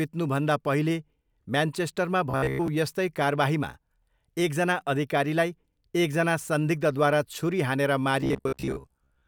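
From 2.31 to 2.68 s, and again from 8.21 s to the end, the speech becomes robotic sound from repeated short buffers: a rigid metallic buzz fixed at 66.8 Hz, likely from roughly 15 ms chunks replayed in place of most, then about half, of the real audio. Unlike codec warble, that pitch ignores the voice's own intonation.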